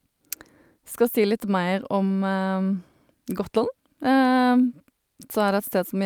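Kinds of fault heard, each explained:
No technical faults detected in the speech recording; nothing to report.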